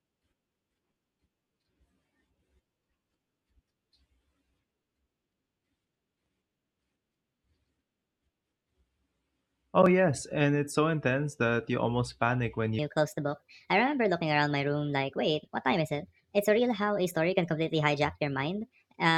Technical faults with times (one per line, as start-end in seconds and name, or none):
12.79-19.18 wrong sample rate